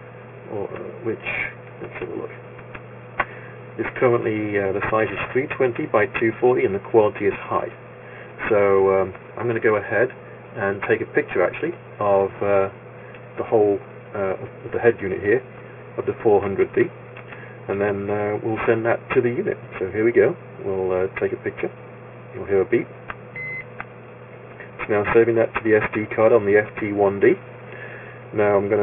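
Aliasing runs throughout: content above 3 kHz folds back into wrong, gritty pitches, which fits an unfiltered drop to a 6 kHz rate, sitting roughly 15 dB below the sound.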